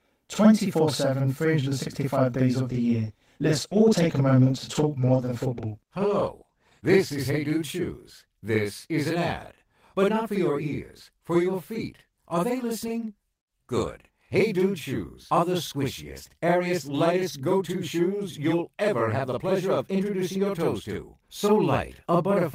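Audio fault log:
Throughout: channel delay (doubling). Every sound arrives twice, with the second copy 46.4 ms behind the first and at the same level. One channel runs late by a fixed buffer. The two channels are then summed to mono. The gap fits a 2048-sample buffer. At this spacing the copies do not blend into one. The ear hears a distinct slap, so each syllable gets a tight, hard echo.
2.69 to 7.27 s: call bitrate drop. Just after "days of", the speech turns coarse and dull. The call's bandwidth estimate fell, so the encoder was told to spend far fewer bits, going from 32 kbps down to 14 kbps. It stays at the low rate for about 4.5 s. With so few bits, Opus quantises roughly and cuts off the upper frequencies. The sound sharpens back up once the rate recovers.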